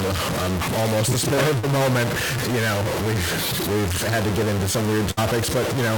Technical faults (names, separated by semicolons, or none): stuck bit; short concealed packet loss; burst of packet loss